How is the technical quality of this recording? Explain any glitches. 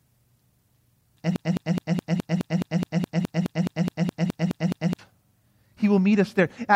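The recording has one glitch: a broken-record loop running from 1.36 s to 4.99 s. A fragment of the speech about 210 ms long plays 17 times back to back, exactly the same each time, and the audio that should have filled those seconds is lost. The likely cause is a stall in the player, encoder or stream that kept resending the last piece it held. It sounds like a rapid mechanical stutter. On a waveform or spectrogram, the identical block tiles every 0.21 s, like a repeating stamp.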